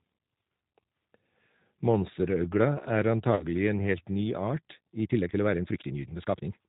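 Throughout, the speech sounds slightly rough and synthetic, with nothing above 4 kHz. This is the G.729 codec, whose plainly audible damage fits an 8 kbit/s stream rebuilding speech from a coarse filter and pulse model.

From 3.35 to 3.46 s, just before "en helt ny art", the sound smears and fades. This is VoIP packet loss concealed by the speech codec: about 40 ms of audio went missing, and the decoder extrapolated from its last frames while reducing the gain.

From 5.01 s to the end, after "en helt ny art", the pace suddenly becomes rushed at about 1.77 times normal speed while the pitch stays put. This sounds like a time-stretched section, likely squeezed by software that dropped short pieces to fit a length.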